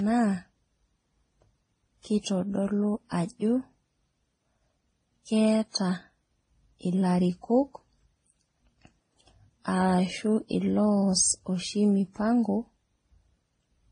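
Speech that sounds dull above about 9.8 kHz and carries several kinds of coding artefacts together throughout. This is likely transcoding between lossy codecs: the sound points to a low-bitrate Vorbis encode, then MP3, then WMA, each stacking its own damage on the last.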